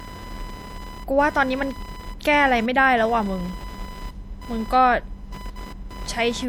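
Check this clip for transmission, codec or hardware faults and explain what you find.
Two faults run through the whole speech clip.

Throughout, a buzzing, chirping whine pulses at around 1 kHz, roughly 20 dB below the speech. This is computer activity noise: processor or graphics load shifting the audio circuit's shared ground.

Throughout, the speech sounds watery and swirly, with smeared attacks. The likely cause is MP3 compression at a bitrate around 64 kbps, which zeroes weak frequency lines that flicker frame to frame.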